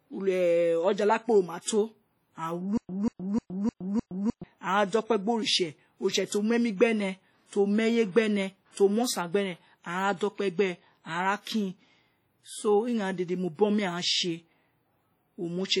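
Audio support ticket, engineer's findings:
WMA compression, throughout: heavy codec damage, ringing and washy tone with hiss breathing alongside the signal; likely a transform codec whose long blocks spread quantisation noise, consistent with a low bitrate around 32 kbps.

Pre-echo, 1.61 to 1.67 s: short hiss before a sharp attack, smeared across about 59 ms, as block-wide quantisation noise fills the quiet lead-in.

Stutter with silent gaps, 2.78 to 4.44 s: a 190 ms fragment repeats 5 times every 305 ms with 115 ms of silence between; likely player or stream stalling and replaying its last buffer, original audio lost.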